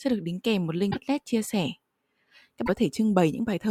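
At 0.90–0.97 s, after "được đính kèm một" and before "chia sẻ", and again at 2.65–2.69 s, the speech skips ahead through a brief glitch. This is likely a broken MP3 bit reservoir: frames were cut out, so the next frames, which borrow data from earlier frames, found the wrong bytes and decoded wrongly. It shows as a smeared vertical patch on the spectrogram and an abrupt discontinuity in the waveform.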